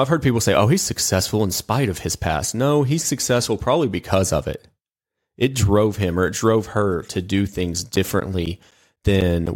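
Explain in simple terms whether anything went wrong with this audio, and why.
Something does go wrong near the end. From 7.96 s, right after "her to do things", until 9.47 s, the speech is cut by periodic USB or driver dropouts: about seven tiny gaps, each around 10 ms of silence, arriving every 0.25 s. A background task briefly stalls the audio connection, so small pieces of sound vanish. Unlike random clicks or network glitches, these ticks are evenly spaced like a clock, and are heard only while someone is speaking.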